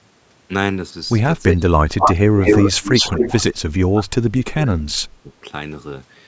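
From 1.55 to 2.4 s the speech dips sharply, by as much as 30 dB. This is speech suppressed in double talk, likely because both ends were talking at once and the echo canceller, unable to tell this talker from the returning loudspeaker sound, turned everything down. The same gating returns from 2.64 to 3.26 s, shallower at around 25 dB, and again from 3.92 to 5.42 s, where the sound is pulled down by up to 30 dB for most of that stretch.

Overlapping the first dip, from 1.98 to 2.13 s, a short scrap of the voice repeats 233 ms late, slightly louder than the speech itself. A longer delayed copy at the same 233 ms lag runs from 2.39 to 3.61 s, roughly level with the speech. This is echo leak. The likely cause is a far end on loudspeaker whose echo canceller let part of its microphone pickup through and sent it back.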